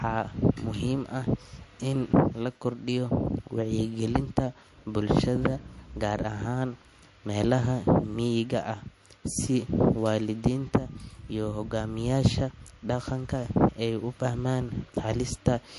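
From start to end, the speech has a hard treble ceiling near 11.3 kHz and a plainly watery, swirling texture with chirpy s sounds, likely MP3 compression at a bitrate around 48 kbps. A spectrogram shows a flat cutoff line and speckled, flickering high-frequency patches.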